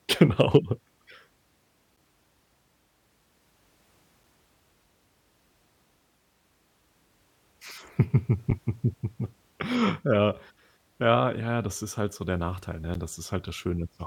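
Three short ticks break into the speech at 1.96 s, 8.50 s and 12.94 s, each a block of digital silence about 9 to 12 ms long. The audio drops straight to silence and back with no fade. The first gap fits a 512-sample buffer that the program did not fill in time.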